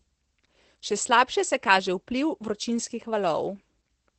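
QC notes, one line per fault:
Throughout: Opus voice compression. The encoder appears to be running its SILK linear-prediction mode in wideband at a low rate, which fits roughly 12 kbps with 20 ms frames. The band stops near 8.6 kHz, so sibilants and breath lose their top and the speech sounds muffled. With so few bits the excitation is coded coarsely, and plainly audible codec damage gives the speech a hoarse, slightly robotic edge.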